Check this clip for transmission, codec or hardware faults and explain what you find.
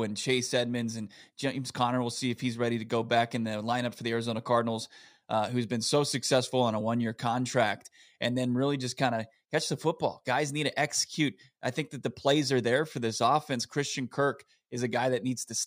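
Nothing to report here: I listened through the whole recording and didn't hear any transmission, codec or hardware problem at any point.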